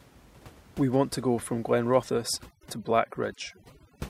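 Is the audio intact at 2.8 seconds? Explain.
No. From 2.1 s to the end, overdone noise removal is at work: bands near the noise estimate are pushed far down, taking quiet speech detail with them. The result is speech over near-silence with twinkling specks, unlike steady room noise left untouched.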